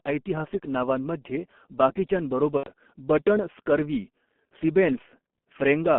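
From start to finish the speech carries the signature of the G.723.1 codec. The line band runs from roughly 200 Hz to 3.4 kHz, so everything above it is gone and the voice sounds muffled. The damage is heavy: the coarse, slowly updated vocal model leaves a hoarse texture and smeared consonants, consistent with a very low bitrate near 6.3 kbit/s working in 30 ms frames.

At 2.57 to 2.69 s, just before "बटण स्कर्वी", VoIP packet loss concealed by the speech codec takes over. The missing stretch is about 90 ms, which fits three consecutive 30 ms frames lost. The decoder fills the gap by continuing its last pitch and filter at falling gain, so the sound is stretched out and fades. Because each frame depends on the previous one, the voice stays weakened briefly after real audio resumes.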